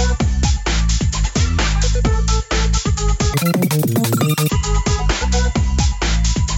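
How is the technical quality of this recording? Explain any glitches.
One glitch stands out. From 3.34 to 4.49 s the sound turns squeaky and rushed, about 2.76 times too fast and 17.6 semitones high. That is a wrong sample rate fault, which fits 16 kHz audio being played at 44.1 kHz without conversion.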